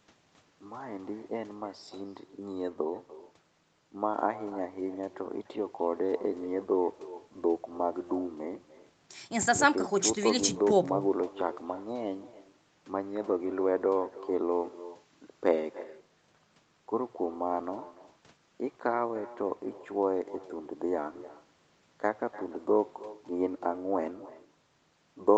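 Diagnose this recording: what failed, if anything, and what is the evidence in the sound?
Call processing failed, echo with no canceller: the far end's microphone recaptures its loudspeaker, so speech repeats roughly 300 ms later, about 17 dB down.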